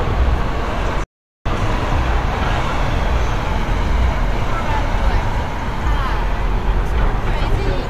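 A digital broadcast dropout from 1.04 to 1.46 s: lost frames mute the receiver within 3 ms, leaving a flat, empty gap on waveform and spectrogram.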